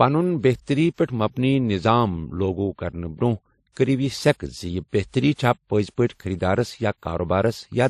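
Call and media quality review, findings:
Speech throughout has layered artefacts: swirly, smeared transients plus a second, different graininess on top, and nothing above 14.7 kHz. This is likely transcoding between lossy codecs. Sounds like a low-rate MP3 re-encoded to WMA, which then spent bits redoing the MP3's damage.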